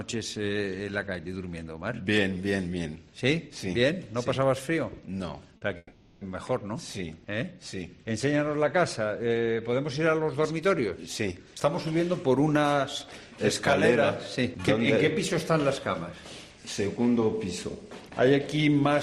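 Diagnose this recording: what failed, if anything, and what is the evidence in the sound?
The network stage failed first. From 5.57 to 5.63 s there is a brief smear in the sound. This is short concealed packet loss. 40 ms of audio arrived too late, so the decoder extended the preceding sound and then blended back into the real signal.

A second network failure follows. From 5.77 to 6.23 s the sound becomes a fading continuation of what came before. It ends in 30 ms of silence before the real sound returns. This is a long network dropout, likely a stall in packet delivery. The receiver filled 440 ms, and that audio is lost.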